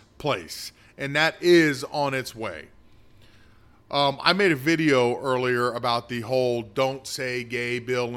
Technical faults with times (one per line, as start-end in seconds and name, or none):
none